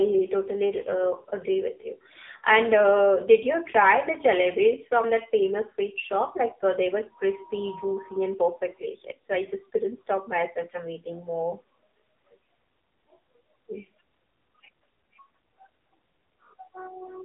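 Speech passed through the AMR narrowband mobile codec for the whole clip, with nothing above 3.8 kHz and a thin band of roughly 250 Hz to 3.6 kHz. Heavy buzzy, synthetic coloration, fitting a low 6.7 kbps mode, marks it as codec damage rather than a simple telephone-band filter.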